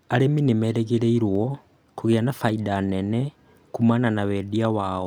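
From 1.35 to 2.32 s, CD scratch ticks appear: six brief clicks, the longest lasting only a millisecond or two, recurring about six times a second. A disc blemish exceeded error correction on each rotation, forcing the player to interpolate or mute the damaged samples.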